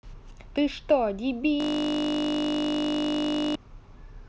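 At 1.60 s the speech locks into a system hang loop until 3.55 s. The computer or driver stalled while the sound hardware kept replaying its ring buffer. One 20 ms slice repeats exactly, about a hundred times, giving a steady 50 Hz buzz.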